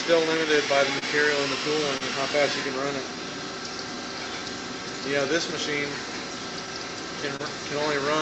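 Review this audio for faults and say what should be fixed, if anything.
Clock drift between sender and receiver runs through the whole clip. The sending clock is slow by roughly 3 percent, so the jitter buffer keeps draining and the receiver has to pad it with repeated material. The result is small, unevenly spaced timing hiccups from start to finish. On a waveform, envelope shapes occasionally repeat or stretch slightly. On a spectrogram, vertical seams appear at irregular intervals. The fix is to lock both ends to a common clock or add an adaptive resampler that tracks the rate difference.

Short stalls from a late packet occur at 0.99 s, 1.98 s and 7.36 s. Each time, a packet missed its deadline, the buffer ran empty, and the last sound was held for about 30 ms until playback resumed where it left off. Nothing is lost, but the sound hangs briefly with a faint buzz or dip. On a spectrogram, each stall shows as a horizontal smear of frozen harmonics. 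The waveform shows a short periodic, looped stretch. The fix is to keep a little more jitter-buffer headroom so a single late packet does not empty it.

Repeated timing corrections run from 3.03 to 7.09 s. Here the receiver plays at about 97 percent speed and stretches the audio by roughly 100 ms in total to stay level with the slow sender. The corrections all go in the same direction but are unevenly spaced. The waveform shows many tiny duplicated segments, and the spectrogram shows faint seams where the pieces were spliced. This audio passed through a call codec whose upper limit sits near 8 kHz. The fix is to correct the underlying drift with continuous resampling rather than periodic splicing.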